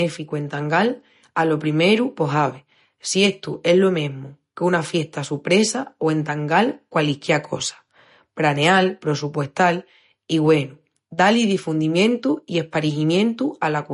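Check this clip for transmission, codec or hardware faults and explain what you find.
One codec fault runs through the whole speech clip. Throughout, nothing sounds above 10.6 kHz and the speech has a watery, swirly quality, likely MP3 compression at a starved bitrate near 40 kbps, zeroing weak frequency lines. The swirl separates it from a plain low-pass filter.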